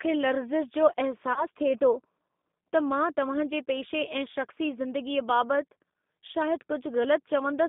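Throughout the recording the speech has the sound of the G.729 codec, here the G.729A variant at 8 kbit/s. The line passes roughly 200 Hz to 3.6 kHz, so the top and bottom are cut away. Each 10 ms frame is rebuilt from a vocal tract filter, a pitch predictor and a few sparse pulses, which gives the voice a plainly audible rough, synthetic quality.

From 1.33 to 1.45 s, just after "लर्ज़िश जो", there is VoIP packet loss concealed by the speech codec. About 30 ms of audio is missing, which fits a single lost packet. The decoder fills the gap by repeating its last pitch and filter with falling gain, so the sound is stretched and fades. Because each frame builds on the previous one, the voice stays weak and distorted until about 1.45 s.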